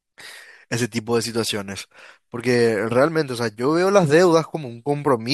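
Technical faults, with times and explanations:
No technical faults can be heard in this speech recording. There is nothing here that needs a time or an explanation.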